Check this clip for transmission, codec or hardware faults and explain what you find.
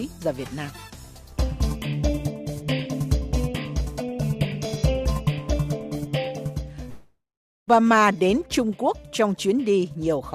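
There is one fault. At 6.89 to 7.69 s there is a long network dropout. Incoming data likely stopped, so the last sound fades out as a buzz or hiss and 0.46 s of silence follows. Unlike a brief glitch, the missing 0.78 s never returns.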